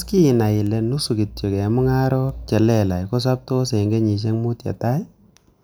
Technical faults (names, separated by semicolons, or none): word clock ticks